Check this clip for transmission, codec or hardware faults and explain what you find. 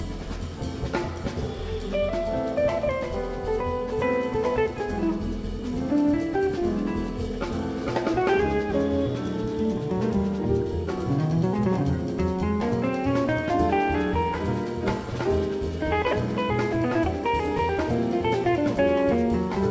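No transmission, codec or hardware faults can be heard in this clip. It has come through a WebRTC call path, and the G.722 codec leaves nothing above 8 kHz, so the top of the spectrum is cut off, which fits a wideband call running at 64 kbps.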